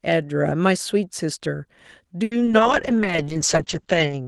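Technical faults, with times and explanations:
2.23–2.61 s, repeated packet loss (robotic sound): choppy patches as four gaps are concealed by stretching prior audio, about a third of the span; longest gap 80 ms.
2.61 s to end, call bitrate drop: speech turns rough and muffled as the encoder falls from 32 to 8 kbps, narrowing bandwidth from 12 kHz to 8 kHz.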